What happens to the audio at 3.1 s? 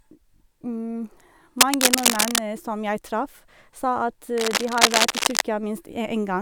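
Nothing goes wrong at 3.1 s; the audio plays through that moment intact.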